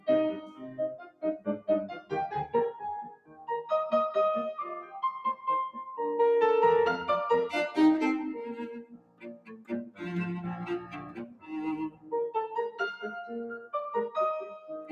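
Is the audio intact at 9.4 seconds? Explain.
No. From 8.77 to 10.01 s the sound is cut by the noise suppressor. It mistakes this stretch for noise and pulls it down by up to about 19 dB over roughly a second, so held or fading parts sink and tails end early while sharp onsets mostly survive.

The noise suppressor applied to music or sounds is also active across the whole clip, including 9.4 s. It treats steady tones and decays as noise, and its gain swings by around 15 dB, giving a pumping, thinned character.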